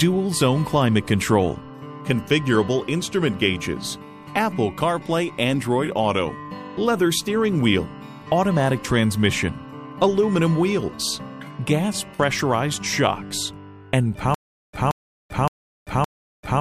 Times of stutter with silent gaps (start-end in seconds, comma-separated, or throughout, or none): 14.34-16.60